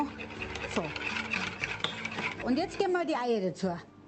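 Nothing goes wrong anywhere in this one; the sound just comes through an ordinary call connection, top end rolled off around 8 kHz the way a call codec leaves it, with nothing that stands out as a fault.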